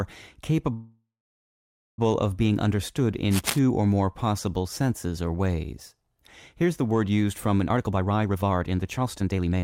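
From 0.73 to 1.99 s the speech stalls: the last sound trails off as a fading buzz, then about 0.92 s of near silence, before resuming with "of being understood". This call audio freeze likely came from delayed packets draining the jitter buffer, inserting a 1.25 s gap without losing any speech.

Between "of being understood" and "or more possible senses", from 3.31 to 3.59 s, a burst of rough scratching and rustling sits over the sound at about 5 dB below it. This cable scratch noise is likely from a worn cable or connector being moved, its contact resistance changing rapidly.

After "word used from an", from 7.67 s to 9.63 s, the speech sounds hurried, running at 144% speed while the pitch stays unchanged. This is a jitter buffer speed-up: the receiver repeatedly cut short pitch-period slices, roughly a second in total, to work off excess buffered delay.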